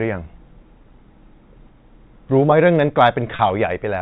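A speech clip carried over G.711 telephone coding, with its narrow band capped at 4 kHz, has a brief buzzy, held sound from 3.36 to 3.39 s. That is packet loss with pitch repetition: about 30 ms went missing, which fits a single lost packet, and the receiver bridged the gap by repeating the last pitch period.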